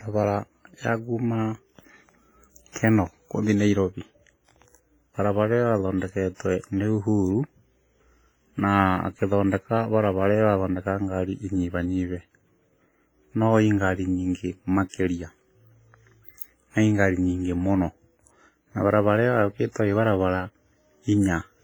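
A transform codec running at a low bitrate, likely WMA compression, is squeezing this speech throughout. The sound is heavily damaged: the quantisation noise spreads across long blocks, so a washy, ringing haze hangs around the speech and a hiss swells and fades with it. Weak detail drops out entirely, which fits a bitrate around 24 kbps.

The same block-based coding causes pre-echo at four attacks. Each time, noise sized for a loud onset fills the quiet stretch just before it, so a brief hiss leads in and the attack itself sounds soft and smeared. This happens at 2.72 to 2.76 s, with the noise spread over about 34 ms, and at 6.35 to 6.40 s, spread over about 54 ms. At 14.89 to 14.94 s, just after "no ĩ ngari nyingĩ", it spreads over about 46 ms, and at 19.72 to 19.76 s over about 39 ms.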